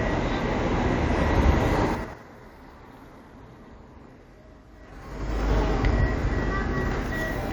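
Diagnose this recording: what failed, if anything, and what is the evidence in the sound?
Zipper noise at 1.86 to 2.23 s and 4.74 to 5.48 s, in the gain stage. The level falls about 25 dB in 6 dB steps, then rises about 25 dB in 3 dB steps, around ten a second. Each unsmoothed jump clicks, giving an audible ticking.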